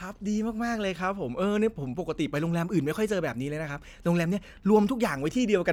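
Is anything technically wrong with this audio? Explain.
No, nothing in this speech recording points to a technical fault.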